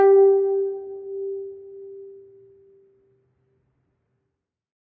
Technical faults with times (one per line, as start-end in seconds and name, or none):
none